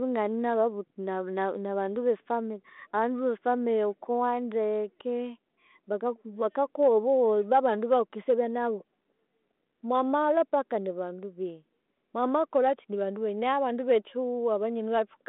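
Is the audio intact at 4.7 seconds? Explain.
Yes, the speech at 4.7 seconds comes through intact, carried on a G.726 ADPCM telephone path at 32 kbit/s that is working as it should there.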